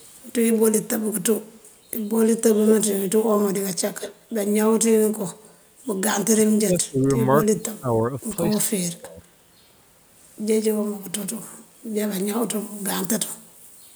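Speech with echo leak at 0.00–0.06 s, 1.52–1.63 s and 4.00–4.13 s: delayed copies about 213 ms and 180 ms behind, strongest at 4.0 s, likely from loudspeaker pickup escaping echo cancellation. Speech suppressed in double talk at 6.33–7.17 s, 7.46–7.97 s and 8.51–9.21 s, dipping by around 30–35 dB, likely the canceller attenuating both talkers during overlap.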